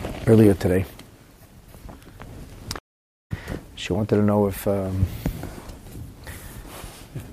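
A playback stall runs from 2.78 to 3.32 s: the sound cuts off in mid-flow and the output drops to silence for about 0.52 s before it picks up again. That break is likely the player running out of buffered data, or its audio thread being held up, so nothing reached the output until it caught up. Because the gap opens abruptly and lasts over half a second, it registers as a clear hole in the audio.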